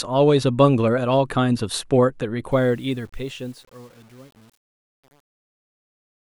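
Truncation distortion on a fade affects this speech clip from 2.52 s to 6.28 s, worst after 2.88 s: the fade-out, starting around 2.5 s, keeps too few bits without dither, consistent with roughly 8-bit resolution, so the quiet tail turns gritty.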